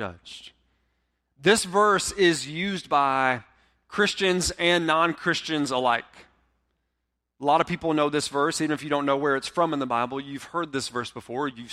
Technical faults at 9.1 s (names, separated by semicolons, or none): none